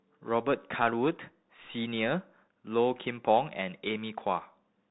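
Across the whole clip the speech carries the Bluetooth CVSD headset codec: nothing survives above 4 kHz, the one-bit delta coder's adaptive step lags loud high sounds so s sounds turn scratchy, and granular hiss sits underneath, which fits a 64 kbit/s stream rather than clean band-limiting.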